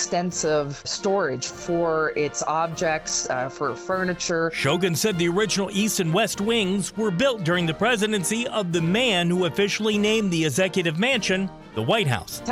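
No technical faults turn up at any point in this audio.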